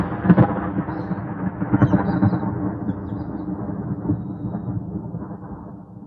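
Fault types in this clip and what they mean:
No fault types turn up here, since nothing in this clip of sounds stands out as a technical problem.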